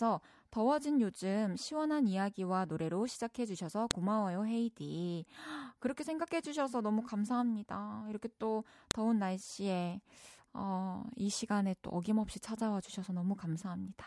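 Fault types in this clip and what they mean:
File header played as audio: a sharp, loud click snaps out of the speech at 3.91 s and again at 8.91 s, each far shorter than 20 ms and unrelated to what the voice is doing at that moment. The two clicks sit exactly 5 s apart, which fits the audio having been joined from 5-second pieces whose WAV headers were left in, so those header bytes play back as a brief burst of raw samples.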